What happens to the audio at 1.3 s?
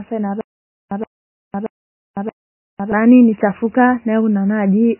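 At 1.3 s the speech is caught in a stutter with silent gaps, running from 0.41 to 2.92 s. A 0.12 s burst repeats four times, each followed by about 0.51 s of digital silence. The likely cause is a stalled stream replaying its last fragment. Heavy MP3 compression is also audible, with nothing above 3 kHz and a watery, swirly texture. This likely comes from a very low bitrate, around 16 kbps.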